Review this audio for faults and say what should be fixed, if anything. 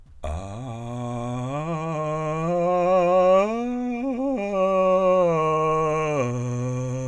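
Nothing needs fixing: the music has no audible interruptions, distortion or unwanted noise.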